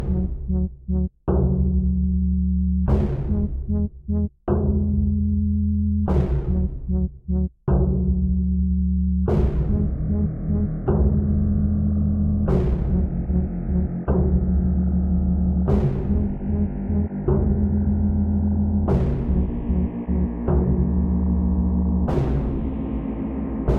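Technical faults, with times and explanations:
No technical faults can be heard, so there are no times or explanations to give.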